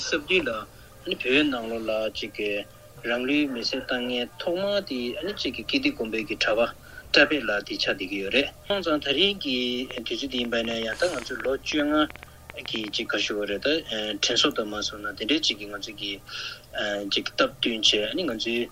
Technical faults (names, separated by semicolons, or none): train of clicks